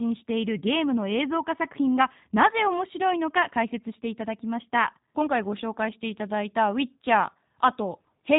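From start to finish, the speech carries G.729 codec damage, plainly audible. It sounds like G.729A at 8 kbit/s. The codec rebuilds each 10 ms frame from a vocal tract filter, a pitch predictor and a few pulses. Nothing above 4 kHz survives. Speech turns rough and synthetic.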